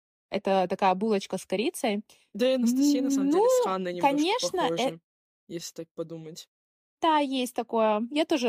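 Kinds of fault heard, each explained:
Repeated buffer: a click at 5.6 s, just before "так подумать", as one 5.8 ms slice played twice because new audio arrived late.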